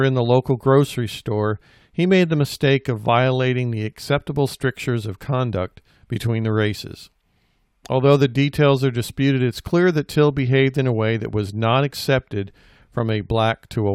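Listening to this speech recording, nothing stood out as a technical problem at any point.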